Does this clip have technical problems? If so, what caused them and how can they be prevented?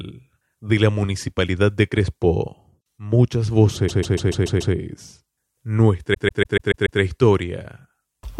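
Yes. Repeated frames at 3.88 to 4.74 s and again at 6.13 to 7.00 s: a 144 ms block of the compressed stream was decoded six extra times, giving a stuttering loop that lengthens the speech by 864 ms each time. Checking frame sequence numbers or timestamps and discarding duplicates before decoding prevents it.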